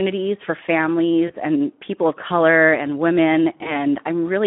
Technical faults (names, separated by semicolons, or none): Speex codec; VoIP packet loss concealed by the speech codec